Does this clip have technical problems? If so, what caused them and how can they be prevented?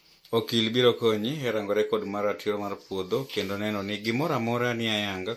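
Yes. MP3 compression damage runs throughout the speech and is plainly audible, with a watery, swirly quality, metallic chirping on s sounds and smeared consonant attacks. This is likely from MP3 encoding at a low bitrate, around 64 kbps. With too few bits, the encoder trims the treble and drops weak frequency lines that flicker on and off between frames. Encoding at a higher bitrate or keeping a lossless master prevents this.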